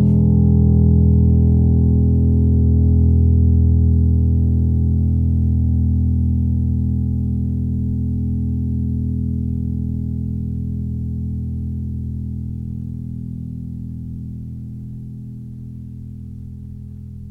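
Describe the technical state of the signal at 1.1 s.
At 1.1 s the music plays through intact, with no dropout, distortion, glitch or other technical fault at that moment.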